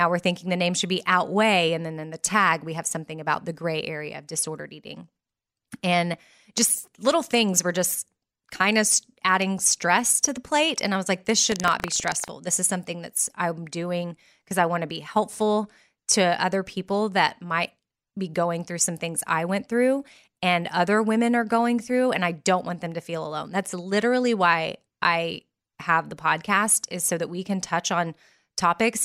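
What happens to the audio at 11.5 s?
Right after "I was like this", from 11.48 to 12.31 s, the speech takes on a robotic rattle at a steady 25 Hz. This is buffer tearing: the writer and the hardware reader of the audio ring buffer have drifted until they cross each period. A small slice of every buffer, a few percent, replays sound from well over a tenth of a second earlier, with hard joins at both edges. Unlike an underrun dropout, nothing goes silent; stale audio is spliced in at a fixed rate instead.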